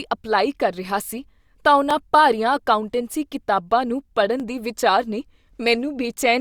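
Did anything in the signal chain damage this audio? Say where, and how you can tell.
Yes. This speech has dropped samples: two single sharp clicks, at 1.91 s just after "ਸੀ ਤਾਂ" and at 4.40 s between "ਕਿਤਾਬਾਂ ਨੂੰ" and "ਦੇ ਵਿਚਾਰ ਨੇ". Each shows as a thin vertical line across the spectrum. Under a millisecond of signal is missing, so the waveform jumps straight to a later value and no sound is lost. A dropout would leave an audible gap, so this is different. The likely stage is the driver or buffer, skipping a sliver while passing blocks along.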